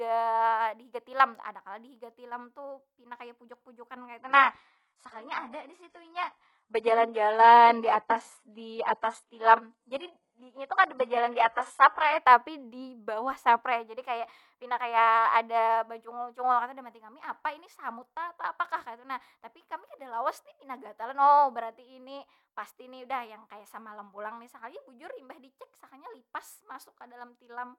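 From 4.18 to 12.18 s the adaptive stream drops to a lower bitrate, which fits a switch from about 96 to 12 kbit/s. The treble is cut, with nothing above 11.5 kHz on a spectrogram, and the change is abrupt with no gap.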